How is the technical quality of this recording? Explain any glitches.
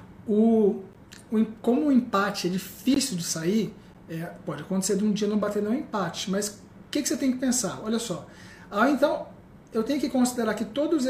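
Three short dropouts interrupt the recording, each a gap between stream segments, at 0.93 s, 2.94 to 2.96 s and 3.94 s. The segments are 1.0 s long, and the timestamps at those boundaries leave holes of roughly 15, 18 and 10 ms that the player fills with silence. Each sounds like a brief hard-edged cut, with no content missing.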